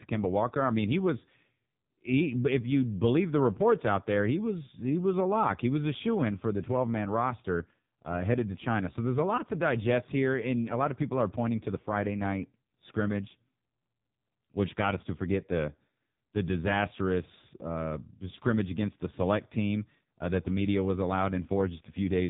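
From start to finish the speech carries AMR narrowband mobile codec damage, and it is heavy. Everything above about 3.8 kHz is gone, leaving a flat ceiling across the whole spectrogram, with smeared, blocky harmonics below it. The voice sounds buzzy and synthetic, which fits a low-rate mode near 5.9 kbps: the codec rebuilds each 20 ms frame from a vocal-tract filter fed by only a few pulses, so fine detail is lost.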